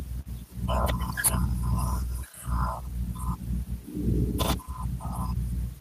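Speech recording; no technical faults can be heard.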